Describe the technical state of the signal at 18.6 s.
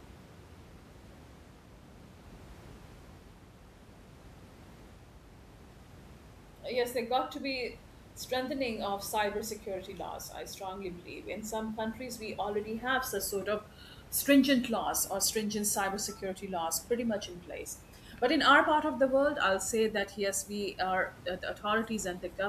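At 18.6 s the speech signal is intact, with only the room's own background noise sitting about 21 dB below the voice.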